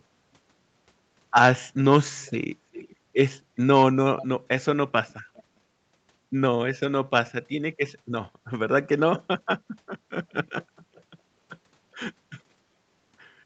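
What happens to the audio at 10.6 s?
A brief echo leak sounds from 10.61 to 10.65 s: a faint, delayed copy of earlier speech, about 0.41 s late and far below the live voice. The likely cause is a far-end echo canceller letting loudspeaker sound back through. Unlike reverberation, it is a distinct repeat, not a smear.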